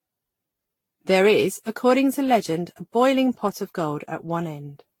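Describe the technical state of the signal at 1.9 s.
At 1.9 s the speech carries the swirly, smeared, hollow character that runs through the whole clip, with blurred consonant onsets and nothing above 19.1 kHz. This is likely generation loss: repeated lossy re-encoding, here sounding like around ten Vorbis passes near 70 kbit/s, each quantising on a shifted frame grid so noise and spectral holes accumulate. A single encode at that rate would not sound this degraded.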